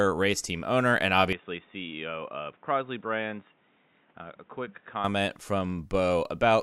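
From 1.33 to 5.04 s the speech turns dull and slightly quieter, likely from an input switched to a poorer device. The spectrogram is empty above 3.8 kHz.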